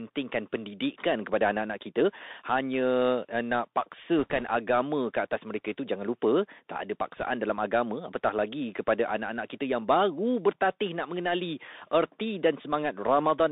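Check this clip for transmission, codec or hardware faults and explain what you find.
Two faults are audible in the speech: a narrowband Bluetooth CVSD headset codec throughout, and two short bursts of bit errors on the Bluetooth voice link.

The Bluetooth CVSD headset codec runs the whole clip. It sends one up-or-down bit per sample, fitting a 64 kbps stream, and it passes only about 250 Hz to 3.7 kHz. Sibilants turn scratchy and a granular hiss sits underneath, unlike plain band-limiting.

Bit errors on a Bluetooth voice link occur from 4.18 to 4.44 s and from 7.17 to 7.23 s, at an error rate of perhaps one to two percent. Each flipped bit nudges the signal by an amount that grows with the speech level and the effect fades, so these bursts sound like rushing crackle rather than the sharp clicks or dropouts of lost packets.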